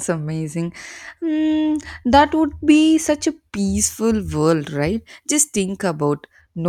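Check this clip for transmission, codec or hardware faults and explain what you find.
Pre-emphasis left on, from 3.75 to 6.41 s after "be such a": a treble boost, matching the CD 50/15 µs curve, was never undone, leaving 10 kHz about 8 dB hot, so the speech turns thin, bright and sibilant.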